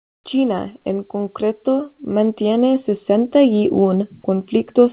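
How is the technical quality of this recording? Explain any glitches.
One glitch is audible, right at the start, heard within a call band that stops at 4 kHz. From 0.00 to 0.24 s the background becomes steady, featureless hiss about 33 dB quieter, likely comfort noise in place of the background, synthesized while transmission paused. A spectrogram shows a smooth, uniform band, and the waveform shows a thin, even trace.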